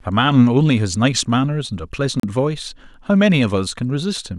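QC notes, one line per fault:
2.20–2.23 s, Bluetooth stall: the speech drops out to dead silence for about 35 ms and then carries on with no crossfade, so you get a hard gap with clean edges rather than a fade or a glitchy burst. That pattern likely comes from the wireless link holding up packets long enough for the headphones' buffer to run empty, so playback simply pauses until the resent data turns up and then resumes.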